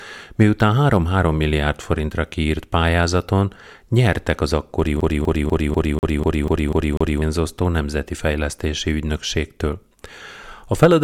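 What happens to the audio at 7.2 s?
At 7.2 s the speech comes out of a CD stuck on one turn, which began at 5.01 s after "pályázaton nyertek az akkori". A scratch keeps throwing the laser back one track, so the same 0.25 s segment repeats nine times, each jump marked by a brief mute.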